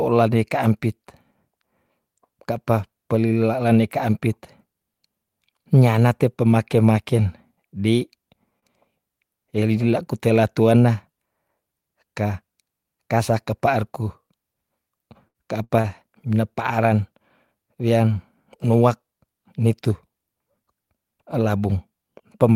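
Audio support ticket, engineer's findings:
Short stall from a late packet at 8.59–8.65 s and 15.81–15.87 s. Jitter buffer ran dry, so the receiver held the last speech sound for about 30 ms with a faint buzz. Nothing dropped, and delay grew by the same amount.

Burst of packet loss at 15.28–15.37 s and 15.64–15.72 s. Consecutive packets were lost and concealment ran about 60 ms, leaving a fading held buzz or hiss. Roughly 60 ms of speech is skipped each time.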